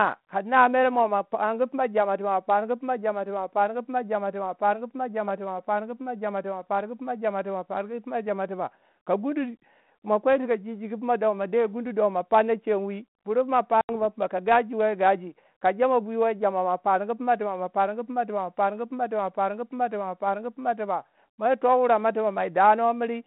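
A telephone-band speech recording, carried over a 32 kbit/s G.726 ADPCM link limited to about 150 Hz to 3.7 kHz, suffers packet loss on an ADPCM call at 13.81 to 13.90 s. About 80 ms, roughly seven packets, drops to silence, showing as a hard-edged blank gap in waveform and spectrogram. The decoder's predictor and step size then restart out of step, so speech resumes slightly distorted until they settle.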